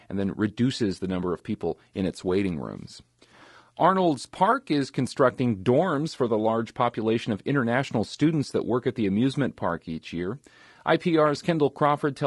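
From start to finish, the speech sounds rough and grainy. Noise fills the gaps between the pitch harmonics, and the top band sounds synthetic. This is likely low-delay AAC compression, AAC-ELD. Its short frames blur the harmonics, and the damage points to a bitrate near 32 kbps.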